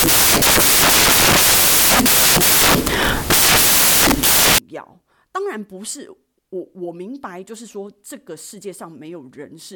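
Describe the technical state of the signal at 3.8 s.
At 3.8 s the speech sits inside a span of samples built from the wrong bytes, 0 to 4.58 s. Misassembled bytes promote low-order bits, producing loud, harsh broadband noise, close to white on the loud sounds.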